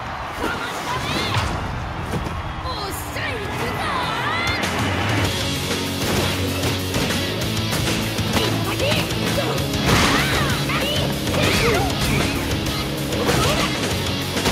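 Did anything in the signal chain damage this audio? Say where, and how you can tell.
No, nothing in this audio stood out as damaged on listening.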